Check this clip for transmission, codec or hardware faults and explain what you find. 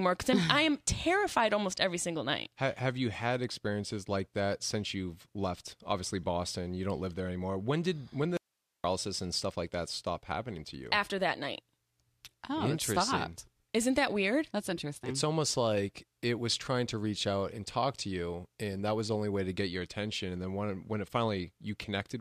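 There's one fault here: at 8.37 to 8.84 s the speech drops out for about 470 ms, leaving only hiss around 50 dB down. It's an audio dropout to a faint residue, likely a brief signal loss upstream while the path stayed live.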